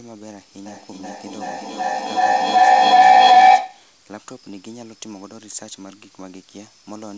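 It's a speech clip, and from 0.66 to 3.93 s a feedback howl takes over: two devices sharing the room keep recirculating the sound, building to about 25 dB above the speech around 700 Hz, with the loop repeating roughly every 400 ms. The audio's top ends at 8 kHz, which fits a G.722 call codec.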